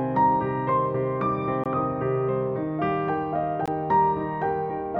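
The audio was delivered in 2-second chunks, with a 20 ms gap between chunks left silent at each join. The sound breaks off abruptly from 1.64 to 1.66 s and again from 3.66 to 3.68 s, leaving two short, hard-edged holes spaced about two seconds apart.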